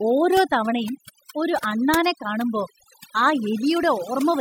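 Overdone noise removal runs throughout the speech. A noise reducer set too strong cuts individual frequency bands whenever they sit near its noise estimate, taking quiet parts of the voice too. Gaps fall to near silence with twinkling specks.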